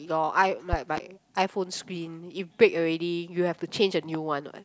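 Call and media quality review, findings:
Loud pops at 0.73–1.00 s (two, about 15 dB above the speech) and 4.15–4.17 s (one, about 10 dB). Likely a voltage transient from a connector, switch or static entering the signal chain; the speech continues beneath each thump.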